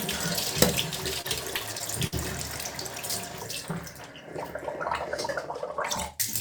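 From 1.21 to 2.14 s the sound breaks into repeated stalls (stutter): seven times the jitter buffer ran dry and the receiver stretched the last sound, about 129 ms in all, the longest gap 53 ms, with nothing lost. It drags and hiccups. On a spectrogram, short smeared or frozen bands interrupt the normal texture.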